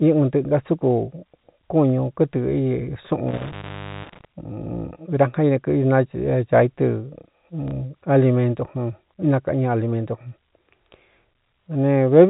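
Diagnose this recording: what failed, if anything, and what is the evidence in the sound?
Between 3.28 and 4.25 s the speech drops out for about 0.51 s, with crackle at each edge and faint hiss in the gap. This is an intermittent contact in the analogue wiring: a loose plug or cable briefly opened the signal path, then reconnected.

At 7.68 s a brief 30 ms blip repeats the preceding fragment. This is network packet loss with the last packet repeated: one lost packet, which fits a 30 ms packet size, was replaced by replaying the previous one in the G.711 telephone stream.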